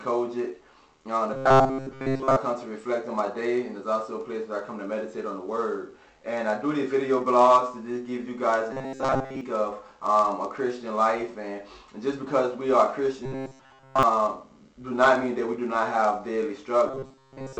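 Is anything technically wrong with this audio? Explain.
Yes. Robotic sound from repeated short buffers occurs at 1.34–2.37 s, 8.73–9.41 s, 13.26–14.03 s and 16.88–17.59 s. New audio likely arrived too seldom, so a 7.5 ms fragment was looped, fully in the first stretch and mostly in the others. This imposes a rigid, metallic 133 Hz buzz.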